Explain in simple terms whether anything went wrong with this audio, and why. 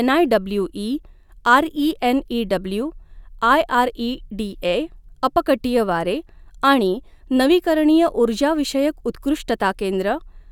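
Nothing went wrong here; the recording holds together the whole way with no glitches, gaps or odd sounds to point to.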